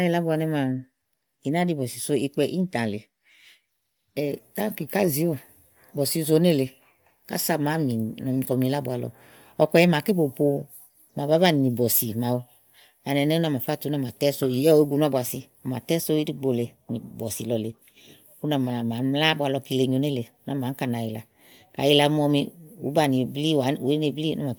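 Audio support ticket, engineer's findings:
Bluetooth LC3 compression, likely cause: LE Audio link encoding at a low rate, which fits a 48 kbps setting with 10 ms frames. Effect throughout: upper spectrum thinned and noise-filled, so the speech is plainly breathy and grainy at the top end. Nothing above 20.2 kHz.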